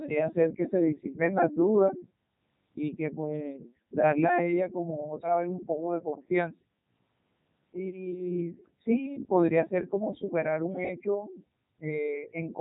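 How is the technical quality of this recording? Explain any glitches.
Quality is poor throughout: the whole clip has passed through a Codec 2 vocoder. Only pitch, voicing, energy and a spectral envelope survive, with the voice rebuilt from sine waves, so speech sounds robotic and buzzy, which fits Codec 2's 3.2 kbit/s mode. A waveform codec would instead leave swirly, watery artefacts.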